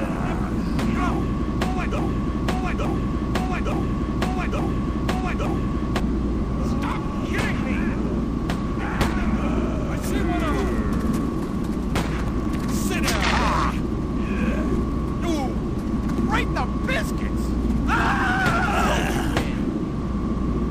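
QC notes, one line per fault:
1.98–6.00 s, broken-record loop: a 0.87 s fragment repeats exactly, back to back, five times, so the sound sticks in place for four seconds and the audio meant for that stretch never plays. The likely cause is a stalled player, encoder or stream resending its last held fragment.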